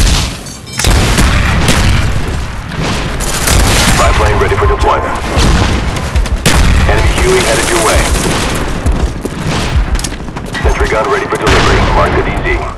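Chunks out of order at 9.68 to 9.70 s: one 10 ms chunk plays a chunk late, swapping places, leaving three hard joins heard as a brief jumbled moment.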